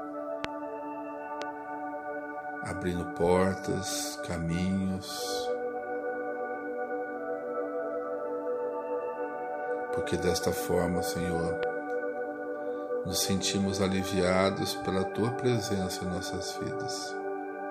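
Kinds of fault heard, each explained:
Loud pop: at 0.45, 1.42 and 11.63 s, single sharp pops stand well above the sound, likely sudden voltage pulses from a switch or plug.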